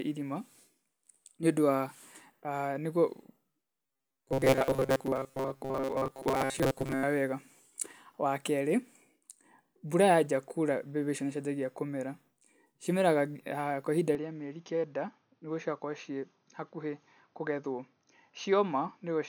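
From 3.86 to 7.04 s, a robotic sound from repeated short buffers, likely from most of the audio being replaced by a repeated 7.5 ms chunk, imposes a metallic 134 Hz buzz, seen as rigid, evenly spaced harmonic stripes on a spectrogram.

From 14.15 s, right after "kwa ihinda", the input likely switched to a poorer device with no gap. The sound turns duller, slightly quieter and faintly noisier, with a lower, flat spectrogram ceiling.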